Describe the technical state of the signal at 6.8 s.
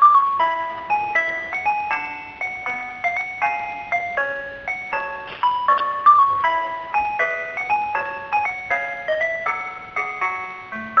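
At 6.8 s the audio is intact, with no dropout, click, distortion or other fault in the signal at that point.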